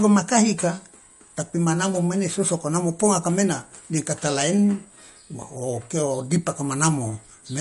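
Throughout the speech, the sound is watery and swirly, s sounds turn metallic and chirpy, and nothing remains above 11.2 kHz. The cause is likely MP3 compression at a low bitrate, around 48 kbps, cutting the treble and zeroing weak frequency lines frame to frame.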